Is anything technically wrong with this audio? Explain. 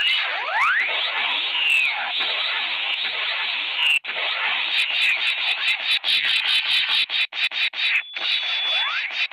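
Yes. From 7.84 to 9.14 s there is loudspeaker feedback squeal. A microphone is hearing its own loudspeaker, and the loop gain passes one at 3.4 kHz. That tone swells over about a second to roughly the level of the sound. On a spectrogram it appears as a single bright horizontal line.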